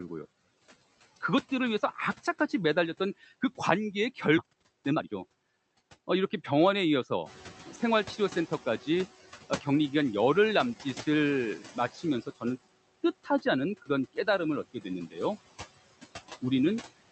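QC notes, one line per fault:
Throughout: noise suppressor artifacts. The steady background is pulled down by about 15 dB, frame by frame, so it dips between phrases and swells under them. A spectrogram shows patchy, flickering low-level noise with gaps between syllables.
4.37 s: skip ahead. Roughly a second of speech is missing and playback jumps forward with no gap, because audio that was already queued was thrown out to shed the built-up delay. The waveform shows an abrupt splice with no silence, and the spectrogram shows a hard discontinuity in the harmonics.
4.41–6.85 s: jitter buffer speed-up. Speech runs about 122 % fast at unchanged pitch and sounds hurried, as the receiver keeps cutting short pitch-period pieces to drain excess buffering, about half a second in total. Syllables look compressed on the waveform, while the harmonic spacing on the spectrogram stays the same.
7.26–9.09 s: noise suppressor catching up. 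Room noise rises by about 12 dB near 7.0 s and comes through with only about 10 dB of reduction at first, then fades over about 1.8 s as the noise estimate adapts. A spectrogram shows a broadband noise floor that brightens suddenly and then gradually darkens.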